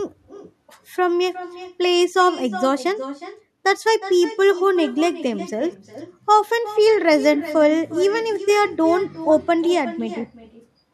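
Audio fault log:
throughout, echo with no canceller: a thin copy about 14 dB down trails each phrase by around 0.4 s, as the far-end loudspeaker leaks unremoved into its microphone.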